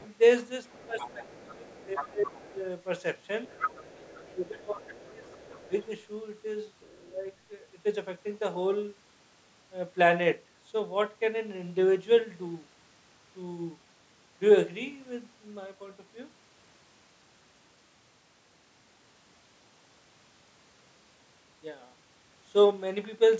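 A faint second voice sits under the speech from 0.0 to 0.08 s, about 30 dB down. It returns from 0.69 to 2.41 s at about 15 dB below, from 3.48 to 4.31 s at about 10 dB below, from 4.86 to 5.86 s at about 25 dB below, and from 6.8 to 7.08 s, again very faint. This is the other side's voice leaking through, likely loudspeaker playback that the echo canceller failed to remove from the microphone. On a spectrogram it shows as a weaker, separate set of harmonic traces overlapping the main ones.

Inside those overlaps, the talker's own speech drops away. From 0.86 to 2.64 s and from 4.0 to 5.73 s it dips by up to about 20 dB, around a second in total for each stretch. From 7.07 to 7.26 s it dips by about 15 dB. This is speech suppressed in double talk, likely the canceller failing to separate the talker from the echo and turning everything down. The waveform shows sudden notches in the envelope, and the spectrogram shows the talker's harmonics fading or breaking up, all beneath an 8 kHz ceiling from the call's microphone processing.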